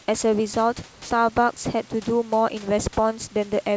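From 0.92 to 1.10 s, the speech gives way to a flat, steady hiss for about 180 ms, then returns. This is likely sound dropped by the voice detector. About 100 ms of sound was treated as background, and comfort noise filled the gap.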